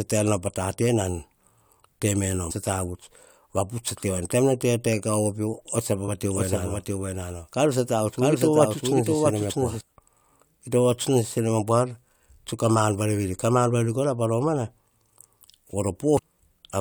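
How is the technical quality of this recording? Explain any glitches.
The recording has two kinds of fault: three short bursts of damaged data in a compressed stream, and one stretch where a doubled audio track plays.

Damaged data in a compressed stream occurs at 2.50 s, at 6.07 s, and from 16.17 to 16.20 s. Corrupted bytes make the decoder misread frames and resynchronise on the next header, producing a brief chirp or squawk. A spectrogram shows a thin vertical smear of broadband energy, and the waveform shows a small discontinuity.

A doubled audio track runs from 6.31 to 9.81 s. A second full-band copy of the speech trails roughly 0.7 s behind, about 5 dB quieter, with no reverberant decay, likely from an edit that left two copies misaligned. A spectrogram shows each pattern repeated to the right, and both the start and the end are abrupt.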